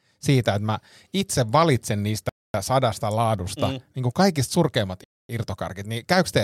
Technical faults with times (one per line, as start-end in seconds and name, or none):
2.29-2.54 gap between chunks
5.04-5.29 gap between chunks